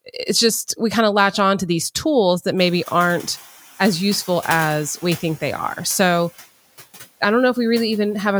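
From 2.57 to 3.47 s, between "to these tools that" and "as useful as we", the noise suppressor is catching up after the room noise jumps about 20 dB. The noise passes with less reduction, then glides down about 6 dB. Unlike gate pumping, this happens once.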